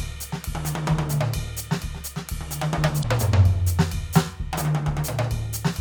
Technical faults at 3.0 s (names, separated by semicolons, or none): damaged data in a compressed stream